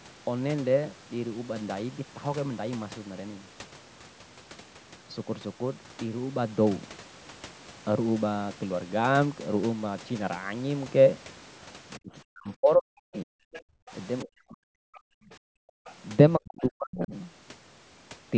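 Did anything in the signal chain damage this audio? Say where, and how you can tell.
Yes, the call processing stage, specifically the echo canceller, damaged it in three ways.

The first is speech suppressed in double talk, from 11.98 to 13.35 s, 14.23 to 14.97 s and 16.38 to 17.15 s. The talker dips by up to about 40 dB, losing its upper range or breaking into pieces. On a spectrogram, the harmonic stacks thin out and gap. The likely cause is the canceller muting both sides when it couldn't separate them.

The second is the other side's voice leaking through, in brief scraps at 13.53 to 13.61 s, 14.95 to 15.00 s and 15.85 to 15.93 s, about 20 to 30 dB below the talker. These are likely echo residue that the canceller left in the microphone path. They show as faint, isolated blips in the waveform.

The third is background gated by the echo canceller, at 13.63 to 13.91 s (dropping about 33 dB) and 15.25 to 15.85 s (dropping about 39 dB). 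The room tone vanishes while the loudspeaker plays, then returns. The waveform's noise floor collapses to near silence, and the spectrogram shows blank vertical bands.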